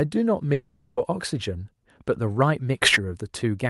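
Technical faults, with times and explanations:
0.53 to 0.99 s, long network dropout: the speech breaks off and its last sound smears into a fading buzzy hiss that fills the whole 0.44 s gap, then speech resumes with that stretch lost. This likely happened because packets never reached the receiver, which covered the hole.
2.82 to 2.96 s, sudden gain jump: speech and background noise leap together by about 18 dB in one step and stay raised for roughly 0.14 s. The likely cause is a digital gain change applied between adjacent samples without any smoothing ramp.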